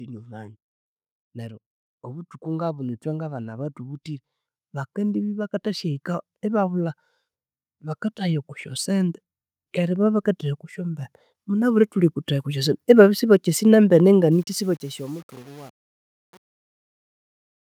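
Automatic gain rising appears three times: from 1.33 to 4.08 s, lifting the level by about 5 dB; from 4.95 to 6.94 s, by about 4 dB; and from 9.74 to 13.29 s, by about 5 dB again. Each time the gain control judges the input too quiet and raises its gain slowly over two to three and a half seconds, so the speech and the background noise swell upward together.

Truncation distortion on a fade begins at 14.32 s and is worst from 14.53 s to the end at 17.69 s. The fade runs from 14.32 s to the end, and the gain stage drops low-order bits without dither, which fits roughly 8-bit resolution. As the level falls toward the smallest step, the waveform collapses into coarse staircase shapes, so the tail turns gritty.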